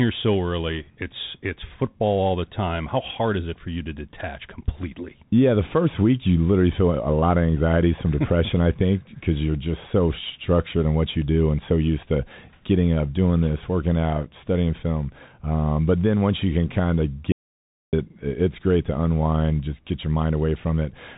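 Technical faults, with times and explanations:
Throughout: Bluetooth CVSD headset codec. Nothing above about 3.8 kHz survives, so the speech sounds boxed-in and telephone-like, and a fine granular hiss sits under it. The coder sends only an up-or-down bit per sample, which fits a 64 kbps CVSD stream. When loud, high-energy sounds change faster than its adapting step can follow, they smear into rasp and s sounds turn scratchy. Plain low-pass filtering would dull the sound without adding that grit.
17.32 to 17.93 s: audio dropout to silence. After "you can kind of" the sound stops dead for about 0.61 s and resumes at "it's great to unwind". The gap is silent with no room tone or hiss at all, which is what separates it from a pause in the talking or a brief level dip. Whatever was said in that stretch is gone. The likely cause is the input briefly dropping, perhaps from a link interruption, while recording carried on writing silence.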